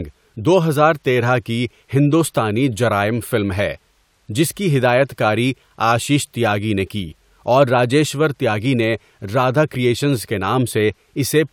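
No technical faults are audible.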